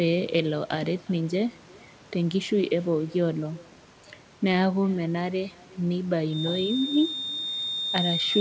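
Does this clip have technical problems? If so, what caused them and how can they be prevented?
Yes. The far end is playing the call through a loudspeaker, and its microphone is picking that playback up and sending it back with no echo canceller to remove it. After the network round trip, which here works out to roughly 0.4 s, every phrase returns as a faint, thin shadow about 27 dB below the speech. This echo with no canceller runs through the whole clip. Turning on acoustic echo cancellation at the far end, or having that participant use headphones, would prevent it.

From 6.26 s to the end at 8.41 s, a feedback whistle appears. The loudspeaker-to-microphone loop at the far end is most likely sitting just at the edge of feedback, so a single frequency near 3.6 kHz keeps ringing without building up. It sounds like a thin, steady tone only a few decibels under the speech, its level slowly swelling and fading. 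Lowering the far-end speaker volume, moving the microphone away from the speaker, or using headphones or a feedback suppressor would stop it.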